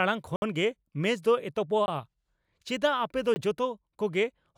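At 0.36 s the speech drops into a block of digital silence lasting 60 ms, heard as a short hole. Shorter 20 ms blocks at 1.86 s and 3.34 s are heard as briefer holes. In each case the samples were replaced by zeros, cutting abruptly in and out with no fade. A waveform shows a flat line, and a spectrogram shows an empty vertical band.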